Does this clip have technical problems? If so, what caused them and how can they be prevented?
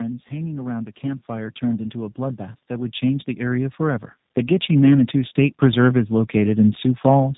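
Yes. Throughout, the speech sounds rough, muffled and warbly, with nothing above 3.8 kHz. This is tandem speech coding: two low-rate speech codecs in a row, each re-encoding the other's degraded output, which fits an AMR-NB to G.729A path. Prevent it by passing the codec transparently end to end or transcoding only once.

From 0.28 to 4.09 s, speech and background swell together by about 13 dB. From 4.66 to 7.33 s they rise again by about 4 dB. This is automatic gain rising: the gain control judged the input too quiet and slowly turned it up. Prevent it by setting a proper input level, so the control has nothing to correct, or by disabling automatic gain.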